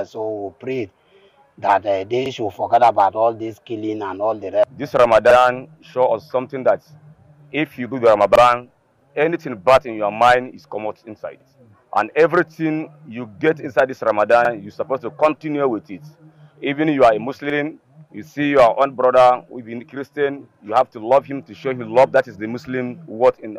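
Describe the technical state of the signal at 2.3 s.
At 2.26 to 2.31 s, overlapping chunks: the audio was handled in blocks of about 3 s, and the next block began before the previous one had finished, so roughly 48 ms is played twice at the join, heard as a brief stutter or click.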